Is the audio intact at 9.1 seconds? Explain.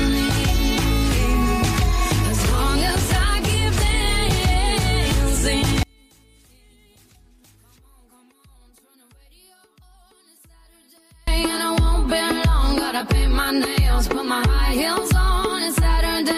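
No. From 5.83 to 11.28 s the sound drops by about 35 dB and turns faint, which points to one channel inverted: the likely cause is one stereo side with reversed polarity, so everything shared between channels cancels when summed to mono.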